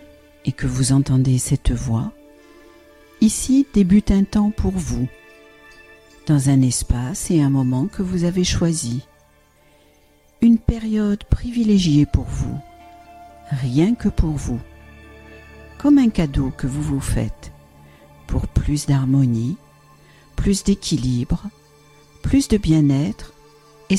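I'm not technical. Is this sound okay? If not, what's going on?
Yes, nothing here sounds wrong.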